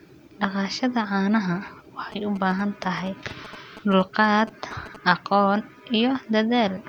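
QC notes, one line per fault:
2.12–4.96 s: GSM signalling bursts. A nearby 2G phone's short radio bursts are rectified by the audio circuitry, giving a galloping dit-dit-dit of short 217 Hz buzzes around 15 dB under the speech. Spectrograms show grouped vertical stripes with 217 Hz harmonic lines; waveforms show pulse trains.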